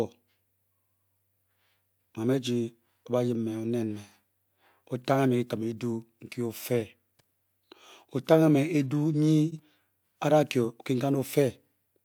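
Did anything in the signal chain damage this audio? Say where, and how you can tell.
Yes. Frames out of order, 9.48 to 9.59 s. This is a transport fault at the network or packet-delivery stage. Two adjacent blocks of about 43 ms each were decoded in swapped order. The speech in that stretch plays its second half before its first, giving a brief garbled flutter. The clip loses no time, which points to reordering rather than loss.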